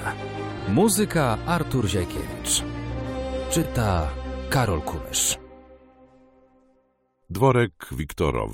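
Four brief garbled flutters occur, at 0.58–0.63 s, 2.15–2.21 s, 3.62–3.68 s and 5.15–5.20 s. Each is frames out of order. Two neighbouring blocks of about 23 ms were swapped, so the two halves play in exchanged order there. No time is lost.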